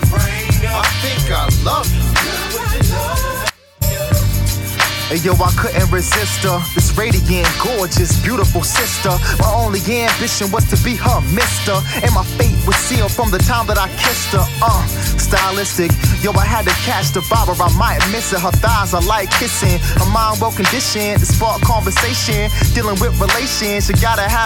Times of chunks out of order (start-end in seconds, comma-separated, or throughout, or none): none